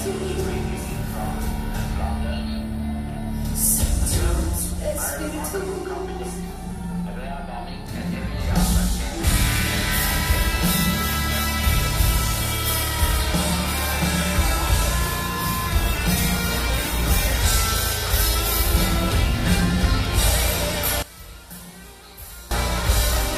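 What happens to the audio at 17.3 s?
At 17.3 s the audio is inside a call bitrate drop (15.85–17.45 s): the encoder falls from 48 to 17 kbps, so the sound turns coarse, watery or muffled. Unlike packet loss, it stays continuous, without gaps, and recovers once the bitrate returns.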